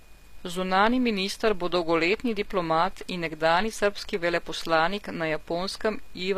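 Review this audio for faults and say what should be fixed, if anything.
Throughout the speech the treble sounds bright but synthetic, with s sounds turning gritty and lispy and the top end failing to match the lower harmonics. The likely cause is HE-AAC compression, which rebuilds the treble by copying lower bands upward, and the plainly audible damage fits a low bitrate around 24 kbps. To prevent it, encode from the original at a higher bitrate or with a codec mode that codes the full spectrum directly.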